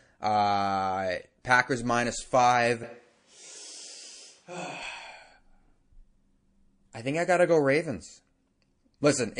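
From start to finish the speech has a watery, swirly quality, with the top end shaved off and high detail flickering in and out. That's most likely MP3 compression at a low bitrate, around 40 kbps by the sound of it. The encoder runs short of bits, so it cuts the treble and drops the quieter frequency lines. Those lines then pop on and off from frame to frame, which is where the swirl and the metallic edge on sibilants come from.

At 1.42 to 1.45 s there's a short burst of pre-echo: a little smear of hiss about 30 ms long, roughly 11 dB above the floor, arriving just before a sharp attack. The codec spreads its quantisation noise across the whole transform block. Here that block seems to be a long one, around 52 ms, with no switch to short blocks. So noise meant to hide under the loud onset leaks back into the quiet moment before it, and the attack sounds soft.

From 2.83 to 4.83 s the sound suddenly goes roomy and hollow, thinner in the bass and about 10 dB quieter. 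Background noise sits only around 25 dB below the speech. That's a switch to a distant microphone, likely because the close mic dropped out and a farther source like a camera mic covered the gap. It cuts back just as abruptly at 4.83 s.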